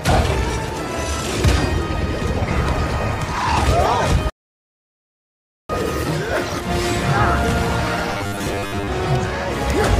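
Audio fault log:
4.30 to 5.69 s, rebuffering stall: the player exhausted its store of downloaded audio and halted playback until fresh data came in. The sound drops abruptly to silence for about 1.4 s, then picks up at exactly the point where it broke off. No material is skipped or repeated; the gap simply pushes everything after it later, stretching the clip by the length of the wait.
8.11 to 8.89 s, robotic sound from repeated short buffers: new audio likely arrived too infrequently, so the playback software covered each gap by looping the most recent short chunk while the genuine audio in between was dropped. Most of this stretch, around seven tenths of it, is made of these repeats. They impose a steady 100 Hz buzz, which fits a repeated chunk of about 10 ms, turning the sound metallic and rigid while it still loosely tracks its original contour.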